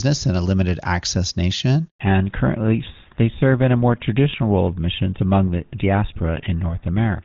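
At 1.88 s the speech cuts out abruptly and stays silent for 120 ms, until 2.00 s. This is a handover gap: the call was passed from one network to another, and no speech frames arrived during the switch, so whatever was said then is gone.

From 2.00 s to the end the speech sounds duller and rougher, with nothing above 4 kHz. This is a fallback to narrowband. The clear HD Voice sound before the break, which fits AMR-WB at 23.85 kbit/s, gives way to what points to the older GSM full-rate codec.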